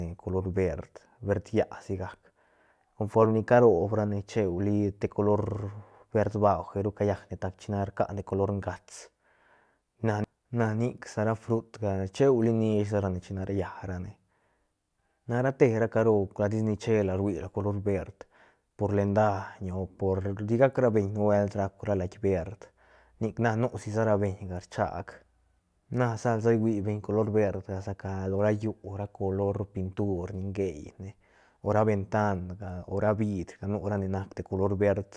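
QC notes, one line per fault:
No faults heard.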